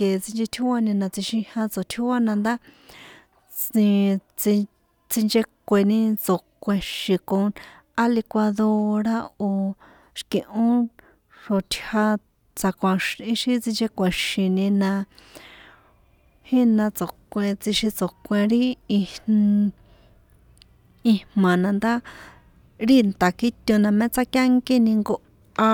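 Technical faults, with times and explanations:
No technical faults found.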